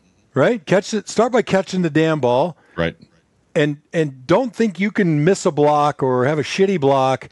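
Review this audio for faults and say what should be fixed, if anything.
No faults turn up in this audio, so nothing needs to be fixed.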